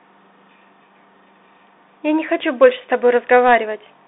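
A speech recording carried over a Bluetooth CVSD headset codec from start to finish, with the damage plainly audible. The band runs from roughly 250 Hz to 3.7 kHz, and nothing comes through above 3.8 kHz, which gives the thin, telephone-like sound. The codec tracks the waveform one bit at a time, stepping up or down with an adapting step size, which fits a 64 kbps CVSD link. Fast, loud high-frequency sounds outrun that step, so sibilants turn scratchy and a granular hiss sits under the speech. There is also a short burst of hard clipping from 2.62 to 2.66 s, where a peak overdrives a stage by about 2 dB. That stage cannot pass the excess, so the waveform tops are cut flat. The squared-off tops add high harmonics, which are heard as a brief crackle on that loud moment.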